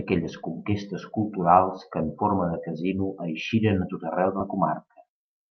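At 4.39 s, just after "tot arreu", the speech jumps forward by about a tenth of a second. This is compressed frames skipped: a few whole codec frames never reached the output, either missing from the file or rejected by the decoder as damaged. The skip fits a small number of frames of roughly 21 ms each. Unlike a dropout, there is no silent gap.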